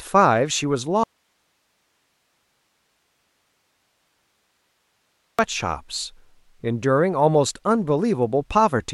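At 1.04 s the speech cuts out abruptly, an audio dropout to a faint residue. Only low hiss, far below the speech level, fills the gap. The speech returns at 5.39 s. The signal was lost for about 4.35 s, likely while the path after the break stayed live.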